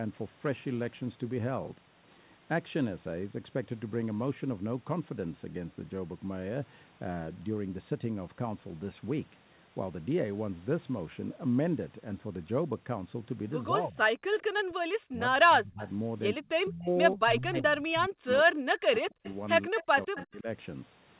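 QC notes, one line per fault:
13.70–13.99 s, 14.68–15.83 s, 16.65–20.47 s: speech suppressed in double talk. With both ends talking at once, the echo canceller likely could not tell the near talker from loudspeaker echo and pulled the whole microphone signal down. The voice dips by about 20 dB in the short first event and by up to about 40 dB in the later two, over roughly a second and then roughly three seconds.
14.27–14.31 s: background gated by the echo canceller. While far-end audio was playing, the canceller clamped the microphone hard for about 40 ms, and the room tone drops by about 21 dB before snapping back once the canceller releases. The band stops at 4 kHz throughout, which fits the G.711 A-law telephone path.
14.38–14.43 s, 18.95–20.26 s: echo leak. The loudspeaker side's canceller likely left part of the picked-up signal in place and sent it back, delayed by 159 ms. The first leak is a brief, faint scrap roughly 25 dB under the speech. 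The second runs over a second at roughly 15 dB down, heard as a trailing copy of the voice.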